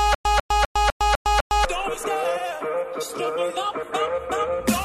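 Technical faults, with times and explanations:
0.0–1.65 s, stutter with silent gaps: already under way as the clip opens, a 145 ms fragment repeats six times, each followed by about 106 ms of digital silence, a steady 252 ms cycle. Likely a stalled stream replaying its last buffer on each retry; the intervening audio is lost.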